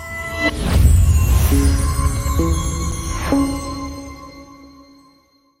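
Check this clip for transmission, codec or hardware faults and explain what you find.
One transmission fault is present: an underrun with held sample at 2.91 s. The output buffer ran dry for about 5.8 ms, a gap of 256 samples, and the converter froze on its last value, so the waveform goes flat and the sound stops with little or no click. Roughly 5 ms of live audio was skipped before playback resumed. A dropout to silence would click on entry as well.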